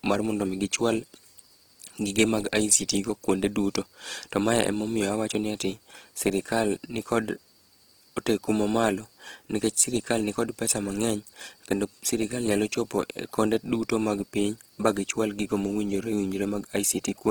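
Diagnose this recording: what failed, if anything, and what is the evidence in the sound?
Opus compression throughout, at the codec stage: the speech sounds grainy and rough though it reaches 20.2 kHz, likely CELT-mode band filling at a rate that fits 16 kbps.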